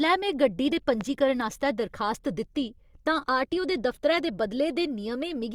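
A speech recording with a single loud pop at 1.01 to 1.03 s, peaking roughly 10 dB above the speech. The speech carries on beneath it rather than cutting out, so this is an added pulse, not a dropout. The likely cause is a voltage spike from a plug, switch or static.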